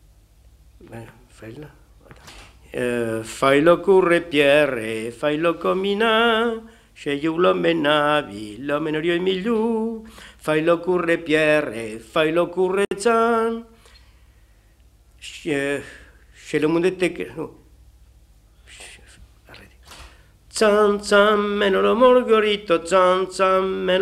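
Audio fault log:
12.85 to 12.91 s, gap at a join of encoded pieces: about 63 ms of silence cuts into continuous sound, where separately encoded segments were joined with encoder delay and padding left in.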